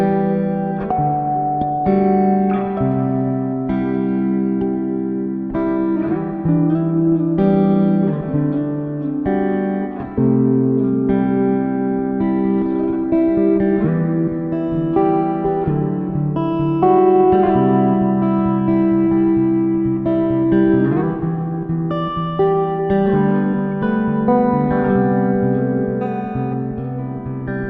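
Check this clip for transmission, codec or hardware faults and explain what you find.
No faults detected.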